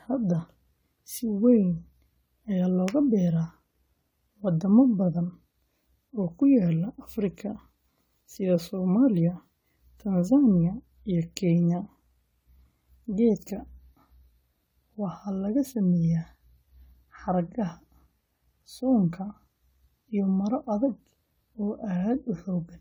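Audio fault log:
throughout, generation loss: the speech has a swirly, hollow, smeared quality beyond what a single pass at this rate would give, and consonant attacks are blurred, likely from around ten successive lossy encodes that fit AAC-LC at 96 kbit/s. Each pass requantises on a shifted frame grid, so noise and spectral holes build up. Content extends up to about 20 kHz.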